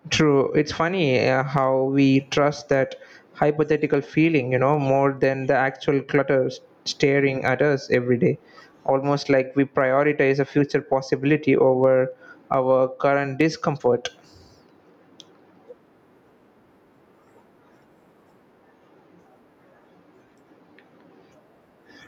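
Gain pumping runs through the whole recording. The gain pulls down on each loud syllable, swinging by around 15 dB, so loud and soft parts sit close in level and the sound is squashed. This likely comes from input gain set far too high, with a fast limiter clamping every peak. On a waveform the envelope looks flattened.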